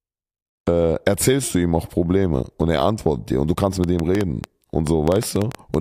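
From 3.84 s to 5.75 s, right after "dir und du kannst", a train of clicks ticks unevenly over the speech, about fifteen pulses at roughly 7.35 per second, peaking about 10 dB above the signal. These are likely interference pulses. On a waveform they appear as sharp spikes, and on a spectrogram as thin vertical broadband lines.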